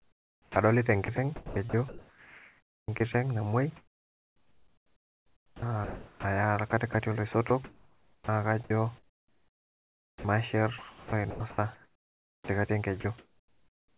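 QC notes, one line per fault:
0.00–3.14 s, 3.76–10.24 s and 10.78–12.48 s: sound chopped by the voice detector. The speech keeps cutting in and out across these stretches. About 1.9 s, 4.3 s and 1.3 s of it are swapped for comfort noise. The sender's detector likely toggled transmission on and off repeatedly.
13.00–13.04 s: sound dropped by the voice detector. A 40 ms piece of speech vanishes under steady noise. The detector likely took it for background and stopped sending. The receiver filled the gap with generated noise, so the sound briefly drops out before returning.
13.00–13.97 s: comfort noise in place of the background. For about 840 ms of this stretch, the real room noise, about 41 dB below the speech, becomes a flat, featureless hiss. Transmission likely paused. The receiver made noise roughly shaped like the background, inside the call's 4 kHz band.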